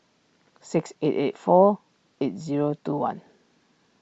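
Bluetooth LC3 compression runs throughout this speech clip, giving a plainly audible breathy, grainy edge. This likely comes from LC3 coding in short transform frames, which fits a 7.5 ms frame at around 48 kbps.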